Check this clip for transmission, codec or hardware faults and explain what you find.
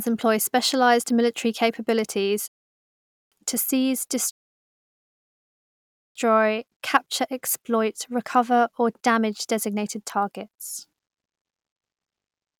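Two rebuffering stalls interrupt this speech clip.

The first runs from 2.48 to 3.32 s, after "employ specialized military capabilities" and before "to seize". Playback drained its downloaded audio and waited about 0.84 s in silence. Speech then resumed exactly where it stopped.

The second runs from 4.31 to 6.16 s, after "military capabilities to seize". It adds about 1.85 s of silence. Nothing is lost. The delivery is simply delayed.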